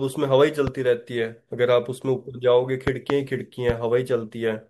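Loud pops hit the speech at 0.67 to 0.70 s, a double pop at 2.88 to 3.12 s, and 3.70 to 3.72 s, peaking roughly 10 to 15 dB above the signal. They are likely voltage transients from a switch, static or a driver glitch.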